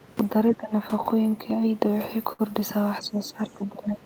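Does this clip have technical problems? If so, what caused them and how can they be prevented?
Yes. Speech suppressed in double talk at 0.51–0.73 s and again from 3.00 s to the end: the speech dips by roughly 20 dB, then about 15 dB, likely because an echo canceller turned down both sides while they talked together. Prevent this with a canceller that has better double-talk detection, or with a headset so the loudspeaker echo never reaches the microphone.

Repeated stalls (stutter) from 0.91 to 2.42 s: about a dozen brief holds, the longest 65 ms and together about 160 ms, as the jitter buffer ran empty and the last sound was stretched until data resumed. Nothing is lost, but the speech drags. Prevent this with a larger or adaptive jitter buffer and a steadier network path.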